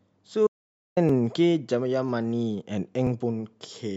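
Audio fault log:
0.47–0.97 s, audio dropout to silence: the sound stops abruptly and half a second of silence follows, with no room tone underneath, before the signal resumes mid-flow. This is likely a momentary loss of the input while recording continued; the material in that gap is gone.
1.09 s, 2.09 s, 3.07 s, overlap between stream segments: a small click or skip lands at each point as 8 to 19 milliseconds of sound are trimmed where adjacent segments' timestamps overlap, so the waveform jumps. The one-second spacing matches the segment length.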